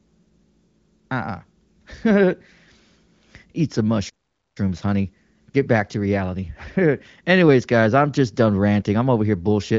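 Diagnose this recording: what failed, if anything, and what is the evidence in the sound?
At the playback stage the output buffer likely ran dry, or the thread feeding it was blocked, causing a playback stall. The speech stops mid-flow at 4.09 s and the output sits silent for about 0.46 s until 4.57 s, when sound resumes. The gap is far too long for a codec dropout, and the AMR-WB HD Voice path, band-limited below roughly 7.6 kHz, sounds clean on either side of it.

The player then tried to recover the time lost in the stall. It ran a time-compressed catch-up from 4.57 s to 7.57 s, trimming small segments and cross-fading the joins to drain the backlog. Over those three seconds the speech runs about 1.1 times faster than normal while keeping its pitch, so it sounds hurried rather than higher.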